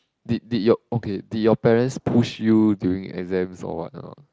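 No technical faults are audible in this speech recording.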